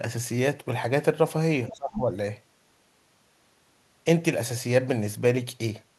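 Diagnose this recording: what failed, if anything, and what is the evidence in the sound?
A faint second voice slips in from 1.68 to 1.75 s, roughly 20 dB below the talker. This is the other side's voice leaking through, a call-processing fault, likely an echo canceller leaving residual loudspeaker pickup in the microphone signal.

Right as that leak appears, the speech itself sinks from 1.71 to 2.02 s, dropping by around 25 dB over roughly 300 ms. This is speech suppressed in double talk: the echo canceller, likely unable to separate talker from echo, pulled both down together.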